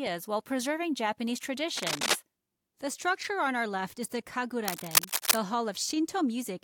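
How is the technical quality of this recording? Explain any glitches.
Two glitches mar the recording, both cable scratch noise. From 1.77 to 2.17 s, and again from 4.65 to 5.39 s, dense, uneven scratching bursts sit over the sound, the first about as loud as it, the second somewhat louder. The likely cause is a worn cable or connector shifting, its contact resistance jumping rapidly.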